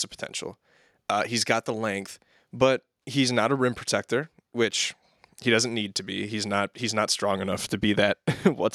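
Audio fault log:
No technical faults can be heard in this speech recording, and the signal carries through without any audible disturbance.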